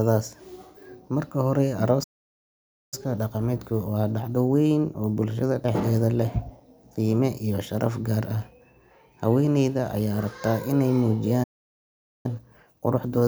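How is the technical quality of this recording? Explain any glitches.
The recording is interrupted twice by stalls, each followed by hurried playback.

A playback stall cuts the speech off from 2.03 to 2.94 s, and again from 11.43 to 12.26 s. The silences last about 0.89 s and 0.81 s. The player likely ran out of data or was blocked, then resumed.

Time-compressed catch-up follows each stall, from 2.94 to 5.94 s at 1.1 times speed, and from 12.26 s to the end at 1.15 times. The player drops and cross-fades small slices to clear its backlog. Speech sounds rushed, at normal pitch.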